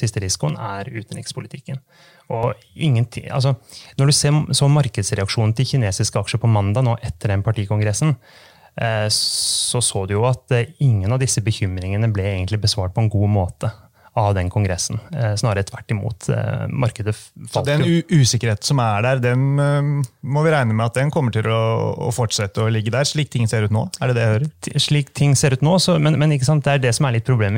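Channel delay (comb filtering) runs from 0.49 to 2.43 s. One channel arrives a few milliseconds behind the other, roughly 5 ms, and when the two are folded to mono the shared content cancels at regularly spaced frequencies, the first near 100 Hz and then about every 200 Hz above it. The speech takes on a hollow, phasey, slightly tubular colour, and the fixed notches stay put for the whole stretch.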